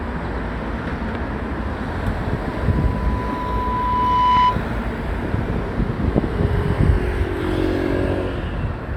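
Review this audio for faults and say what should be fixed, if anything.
Loudspeaker feedback squeal runs from 2.44 to 4.63 s. A tone near 997 Hz swells over about two seconds to roughly 10 dB above the sound. The microphone's loop gain exceeded one there. To prevent it, lower the gain or move the microphone away from the loudspeaker.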